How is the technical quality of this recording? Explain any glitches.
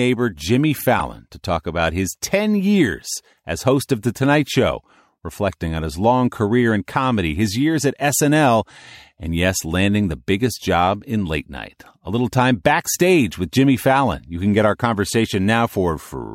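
The speech carries two brief glitches from a corrupt frame decoded: an error burst at 0.99 s, just before "to talk about his", and a quieter error burst at 15.68–15.71 s. Damaged compressed frames, a few in the first and one in the second, were played anyway, scattering energy across the wrong frequencies.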